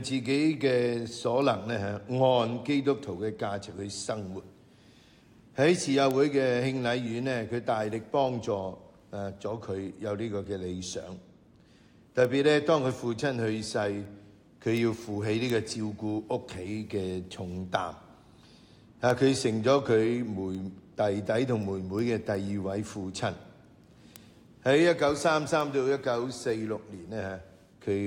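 From 0.34 s to 27.77 s a tick recurs at a steady rate of roughly one every 0.4 s, about seventy in all. These are word clock ticks. The receiving device runs on its own clock rather than locking to the sender's digital link. The two rates differ by something on the order of 50 parts per million, and each time they slip past each other a few samples are misread and a single sample is dropped or repeated.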